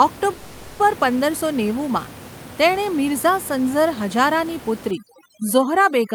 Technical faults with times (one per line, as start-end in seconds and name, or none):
0.33-0.81 call audio freeze
4.91-6.14 overdone noise removal